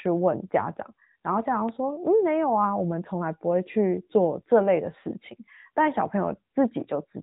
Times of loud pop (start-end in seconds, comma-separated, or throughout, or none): 1.69-1.71